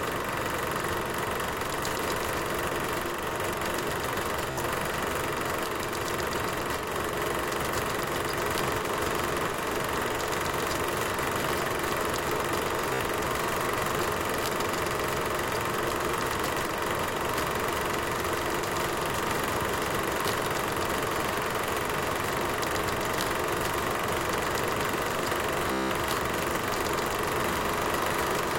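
Everyday sound with Bluetooth stutter: packets dropped out, so the receiver looped its last slice, buzzing at 4.51–4.60, 12.94–13.01 and 25.73–25.92 s, skipping about 61 ms, 61 ms and 183 ms.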